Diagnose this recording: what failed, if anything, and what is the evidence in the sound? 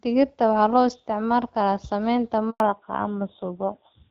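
Network stage: a handover gap at 2.50 s silences the speech for 100 ms, until 2.60 s, as no frames arrive while the call switches networks.

Codec stage: fallback to narrowband from 2.60 s to the end. Everything above 4 kHz disappears and the speech turns dull and rough, pointing to a low-rate narrowband codec replacing HD Voice.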